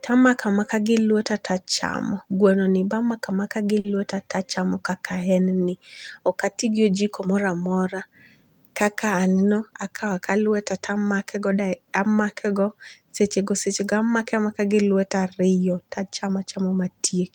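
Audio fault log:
3.79–3.87 s, short stall from a late packet: right after "amaka gi" a packet showed up late, so the last sound gets held about 50 ms, with nothing actually lost.
9.71–10.39 s, jitter buffer speed-up: the buffer had piled up, so tiny pitch-period slices got trimmed, roughly 70 ms in total; speech runs about 8% faster at the same pitch, right before "lueta tamake".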